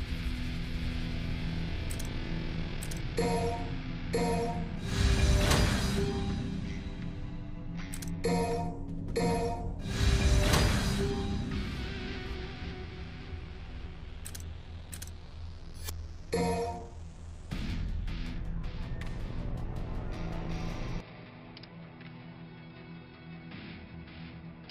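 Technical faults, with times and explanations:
21.0–24.7 s, input switched to a poorer device: at 21.0 s the sound goes dull and drops about 10 dB, with nothing above 5.3 kHz and faint new background noise, but no gap at the change. Likely the input jumped to a narrower-band mic or headset.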